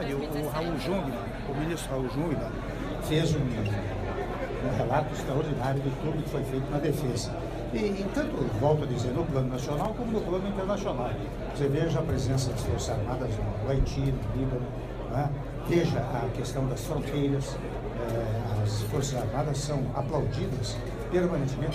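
At 9.85 s the output path drops one block of samples and writes zeros in their place, a block of digital silence lasting about 2.7 ms, which points to a single 128-sample buffer that went out empty. The audio snaps to dead silence and straight back with no fade on either side, so the two hard edges merge into one brief tick rather than an audible hole.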